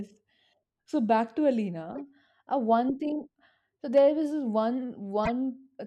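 Damaged compressed frames were played as if intact, a corrupt frame decoded fault that puts energy at wrong frequencies. Just after "back to", a few frames from 1.89 to 2.00 s give a glitch; from 5.24 to 5.29 s, a couple more burst out much louder.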